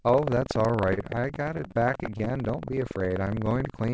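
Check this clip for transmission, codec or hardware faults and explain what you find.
Three faults show up, and they overlap. The speech comes through a G.722 call path at 64 kbps, so nothing sits above 8 kHz.

Buffer tearing runs the whole way through. The writer and the hardware reader of the playback ring buffer have drifted until they cross inside each period. A small slice of every buffer, well under a tenth, plays audio from about 150 ms earlier, with hard joins on both sides. That gives a steady robotic buzz at 21.5 Hz, which fits a 2048-sample buffer, and you only hear it while there's signal.

Repeated stalls (stutter) run from 0.94 to 2.35 s. Packets kept arriving late, so the jitter buffer drained about two dozen times. Each time, the receiver stretched the last sound to cover the wait. The longest wait was 32 ms, and 303 ms were filled that way, about 21% of the span. Nothing is actually lost, but the speech drags and hiccups in short, choppy bursts across that stretch.

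A jitter buffer slow-down runs from 3.06 to 3.3 s. The receiver was rebuilding its reserve by repeating single pitch periods back to back, which added 42 ms. Playback there runs at about 86% speed with the pitch unchanged. It sounds drawn out, with sounds held a touch too long, rather than stuttered.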